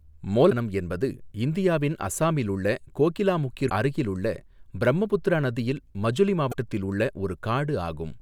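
At 0.47 to 0.52 s, 3.66 to 3.71 s and 6.49 to 6.55 s the speech is interrupted by a short burst of damaged data in the compressed stream, each lasting about 50 ms. Bytes in the encoded file were lost or corrupted at those points, so the decoder misreads the affected frames, loses sync and hunts for the next valid frame header. Each event is heard as a brief disturbance cutting across the speech.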